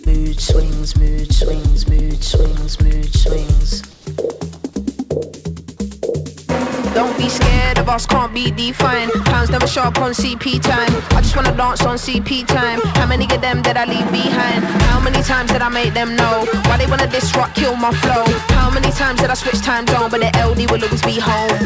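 At 0.04 to 0.07 s comes a short concealed packet loss. About 20 ms of audio never arrived in time, and the receiver patched the gap by extending the preceding sound for about 15 ms before blending back into the real signal. It is heard as a brief smear or wobble right at the start. On a spectrogram it shows as a thin column where detail blurs into a smoothed continuation.

From 3.91 to 4.05 s, 140 ms of the quiet background, which sits about 28 dB below the loud parts, is replaced by a flat, featureless hiss about 7 dB quieter. The likely cause is comfort noise in place of the background, generated by the receiver in the manner of RFC 3389 while the sender was not transmitting. On a spectrogram the textured floor gives way to a smooth, uniform band for that stretch, and the waveform envelope drops to a steady, even low level. Throughout, the call path leaves nothing above 8 kHz, so the spectrogram is empty above that line.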